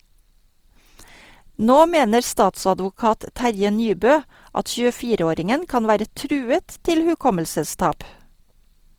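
Throughout the speech, the sound is rough and grainy, with a noisy fizz in place of clean tone. The likely cause is Opus compression in its music mode, which fills starved bands with folded or noise energy. This fits a rate near 24 kbps. Content still reaches 20.3 kHz.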